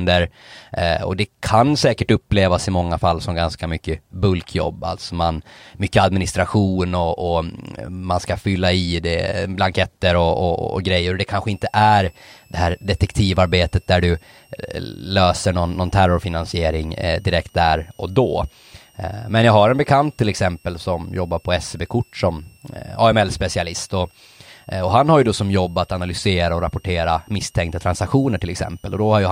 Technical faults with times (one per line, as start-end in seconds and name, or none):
11.51-29.31 switching supply whistle